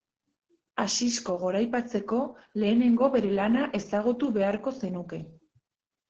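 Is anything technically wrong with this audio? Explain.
Yes, there's Opus voice compression through the whole speech clip. The SILK coder is squeezing it hard: nothing above 9.7 kHz, and the excitation is coded coarsely, which fits a bitrate around 10 kbps. It sounds muffled, a bit hoarse, faintly robotic.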